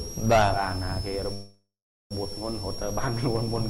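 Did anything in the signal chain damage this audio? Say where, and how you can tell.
Yes. A switching supply whistle runs through the whole clip, so the damage is in the analogue wiring and power stage. A high tone sits at about 5 kHz, wandering between 5.08 and 5.69 kHz rather than holding one pitch, at roughly 15 dB below the wanted signal. That drifting pitch points to a switch-mode regulator running in an audible burst mode as its load shifts, coupling into the audio path through ground or supply lines.

A call audio freeze at the network stage interrupts the sound from 1.33 to 2.14 s. The last sound is stretched into a decaying tail, then falls to silence for about 390 ms before normal audio resumes exactly where it left off. Around 773 ms of filler is inserted with nothing lost, so everything after it arrives late by that amount. The likely cause is packets delayed in transit, leaving the receiver's jitter buffer empty until they caught up.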